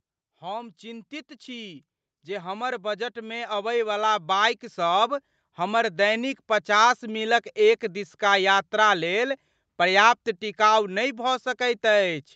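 From 0.39 s to 7.31 s the level of the speech climbs steadily as automatic gain rising takes hold: the gain control judged the input too quiet and kept raising its gain, by about 12 dB in total over nearly seven seconds. Voice and background noise swell together, so the room grows louder along with the talker until the rise levels off just before "एक दिसका". Throughout, nothing is heard above 8 kHz, consistent with the band limit of the call path.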